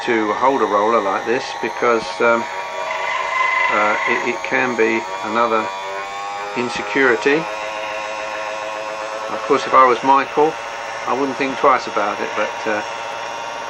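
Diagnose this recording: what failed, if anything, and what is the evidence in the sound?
No stage in the chain leaves an audible trace of failure, with the signal holding continuity throughout and no breaks, distortion or added noise to point to a fault in capture, conversion, transmission or playback.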